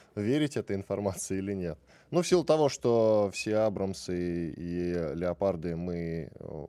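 No technical faults are audible.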